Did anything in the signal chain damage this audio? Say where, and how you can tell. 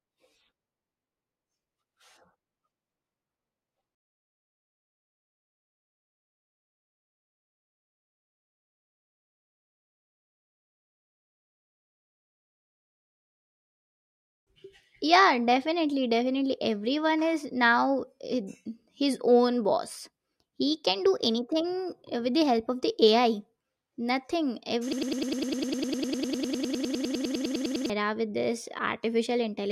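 Yes. From 24.93 to 27.90 s, a broken-record loop replaces the speech. One 101 ms fragment repeats identically 29 times back to back, and the intended audio is lost. Unlike echo, the copies never decay. The likely cause is a stalled playback or stream buffer.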